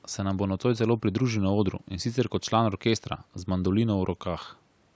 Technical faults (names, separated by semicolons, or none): none